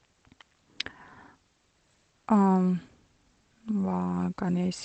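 No technical faults can be heard in this speech clip.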